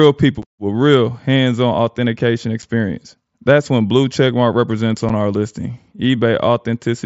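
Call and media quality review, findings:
Three brief dropouts in the speech at 0.42, 2.62 and 5.09 s, each about 7.5 ms with abrupt edges. Unconcealed Bluetooth headset packet loss: single voice packets lost and replaced by silence or an idle pattern, over an mSBC wideband link.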